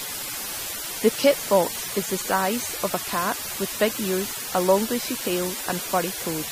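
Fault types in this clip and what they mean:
Low bit depth with dither: The speech has been reduced to very few amplitude steps, with random dither added before rounding so the rounding error becomes steady broadband hiss rather than distortion. Here the hiss is loud and constant throughout, sitting only about 10 dB below the speech itself, which fits a signal carried on roughly 5 bits. The noise floor stays even whether the speaker is talking or pausing.
MP3 compression: The audio has a watery, swirling quality that is plainly audible across the whole clip, and nothing is present above 15.3 kHz, where the treble stops at a hard cut-off. This is likely lossy MP3 encoding at a low bitrate, around 40 kbps. At that rate the encoder drops weak frequency components that flicker on and off between frames, leaving sibilants metallic and consonant attacks smeared.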